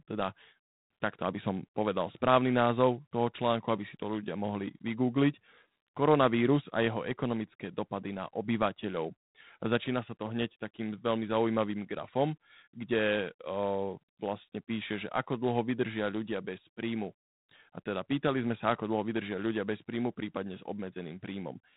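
Throughout the speech, G.726 ADPCM coding is plainly audible: nothing passes above about 3.9 kHz, and a harsh, rasping hiss rises and falls with the speech level. The coarse difference coding behind that hiss fits 24 kbit/s operation.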